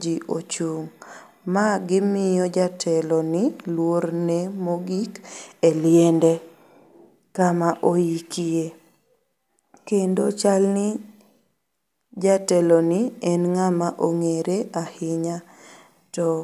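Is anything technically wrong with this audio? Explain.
No, the signal carries through without any audible technical fault.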